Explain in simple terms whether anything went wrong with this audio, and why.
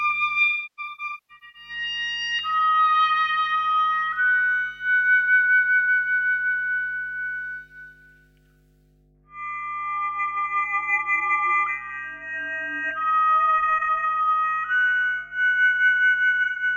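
Mains hum runs through the whole clip: a steady low 50 Hz buzz under the sound. It comes from the electricity supply leaking into the recording, through a grounding problem or a transformer near the equipment. It sits quietly beneath everything.

AAC frame loss with concealment occurs from 0.44 to 1.69 s and again from 16.43 to 16.63 s. Short pieces of the compressed stream went missing, and the player patched the gaps by reusing the last good sound. In the first stretch the gaps are scattered, the longest around a third of a second, so the sound turns smeared, hissy and hollow in patches. The second gap is about 0.13 s long and causes a brief smudge.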